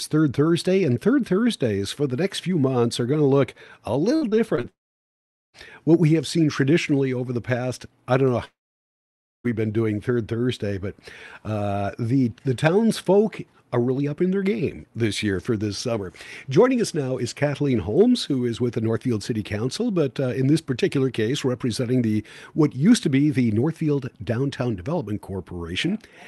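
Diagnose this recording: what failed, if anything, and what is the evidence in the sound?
Repeated packet loss (robotic sound) in the network stage, 4.15 to 4.65 s: four short holes, longest 59 ms, each patched by continuation. Sound returns between them, giving choppy texture.

From 4.69 to 5.55 s and 8.45 to 9.46 s, sound decays into a brief fading buzz, then near-silence, resuming with content missing. A long network dropout is the likely cause, not a deliberate mute.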